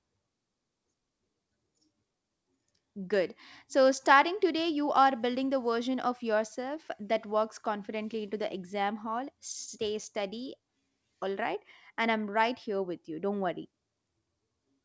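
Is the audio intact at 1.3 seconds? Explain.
Yes, the audio at 1.3 seconds is intact, with no dropout, glitch or other fault at that moment.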